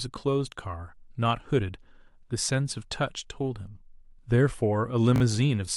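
Right near the end, from 5.16 to 5.20 s, there's a case of chunks out of order. A 20 ms slice of the speech got delivered one chunk late, so it plays after the slice that should have followed it. Nothing actually goes missing, but the two pieces swap places, leaving three hard joins in about 40 ms. You hear it as a tiny jumbled stutter.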